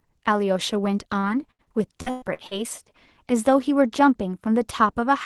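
From 1.19 to 2.54 s the speech turns choppy and robotic. This is repeated packet loss: seven gaps, the longest 114 ms, roughly 400 ms in all, each patched by stretching the preceding sound before the next dropout.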